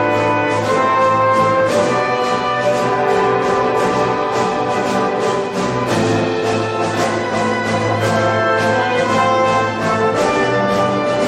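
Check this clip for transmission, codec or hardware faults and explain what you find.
Nothing in the clip points to a transmission, codec or hardware fault. The audio holds together without any break, disturbance or sudden change that would suggest a problem along the chain.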